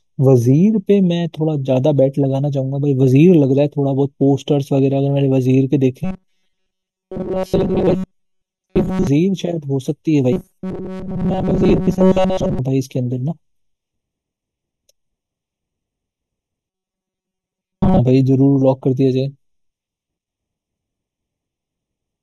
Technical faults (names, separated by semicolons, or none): channel delay (comb filtering); robotic sound from repeated short buffers